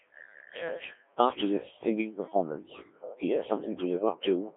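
Throughout, the speech has been passed through the Codec 2 vocoder at a very low rate, which fits about 1.3 kbit/s. Only pitch, voicing, energy and a coarse spectral envelope survive, and the decoder rebuilds the voice from sine waves. The result is heavily robotic and buzzy, confined to roughly 300 Hz to 3.5 kHz.

From 0.77 to 0.93 s, bit errors on digital voice radio corrupt three vocoder frames at an error rate of a few percent. Because every bit steers a whole frame's pitch, level or spectrum, the voice briefly lurches in pitch and tone and breaks into a warbling, bleeping burst.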